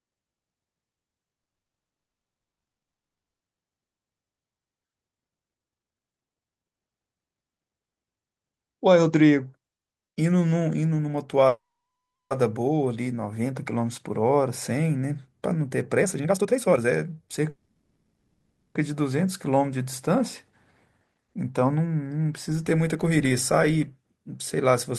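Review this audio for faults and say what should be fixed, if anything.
Call audio freeze: packets were likely held up in transit, so the jitter buffer ran dry at 1.43–3.42 s, 11.48–12.33 s and 17.50–18.77 s. The receiver stretched the last sound into a fading fill, then went silent. At 1.43 s the full 2.0 s is silent, at 11.48 s about 0.72 s of 0.83 s, and at 17.50 s about 0.26 s of 1.25 s. Playback then resumes where it stopped, so nothing is lost but each gap adds its length to the delay. To prevent it, fix the congestion or routing causing the delivery stalls and size the jitter buffer to ride out short bursts.

Jitter buffer speed-up: the buffer held too much audio, so the receiver cut out short pitch-period pieces to catch up. From 15.97 to 17.41 s the sound plays at 150% speed with roughly 0.7 s removed and sounds rushed at unchanged pitch. A gentler 108% runs from 20.93 to 24.93 s, trimming about 0.3 s. 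To prevent it, limit how fast the buffer may drain so excess delay is shed gradually rather than in hurried bursts.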